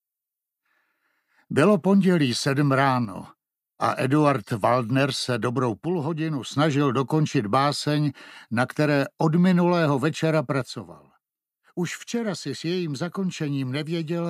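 At 3.05 to 3.16 s, 5.85 to 6.55 s, and from 10.62 s to the end, the level drops abruptly by about 6 dB and snaps back only at the first two points. This is most likely one channel dropping out, with the mono sum halving whatever both channels shared. On a waveform the envelope steps down to half height with vertical edges. A spectrogram shows every band dimming uniformly at once.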